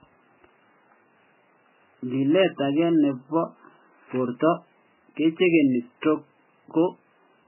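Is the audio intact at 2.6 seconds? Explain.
No, the speech there is damaged throughout the clip, likely by heavy MP3 compression at a very low bitrate such as 8 kbps, which removes everything above 3 kHz and leaves a muffled, watery, swirling sound.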